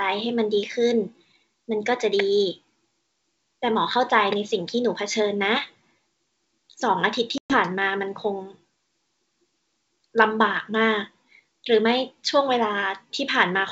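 Speech over a G.722 wideband call shows packet loss on an ADPCM call from 7.38 to 7.58 s. About 120 ms drops to hard-edged silence, which fits several lost packets. The decoder's predictor then resumes out of step with the sender, so the returning sound distorts slightly and briefly.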